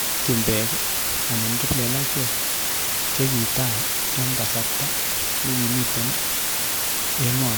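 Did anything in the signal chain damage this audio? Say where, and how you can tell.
Yes: low bit depth with dither at sample-format conversion. Steady, even hiss runs throughout at nearly speech level, not gritty distortion, which fits a 3-bit word with dither.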